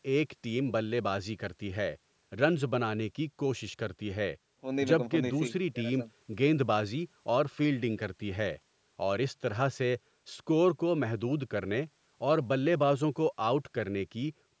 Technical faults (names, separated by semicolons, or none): none